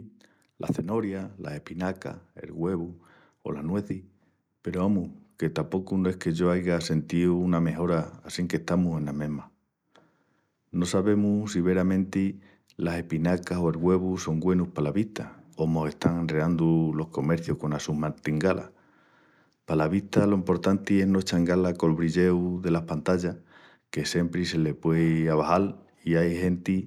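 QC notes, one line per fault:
0.92–9.49 s, automatic gain rising: the level control judged the input too quiet and lifted its gain by about 7 dB, so speech and background swell together.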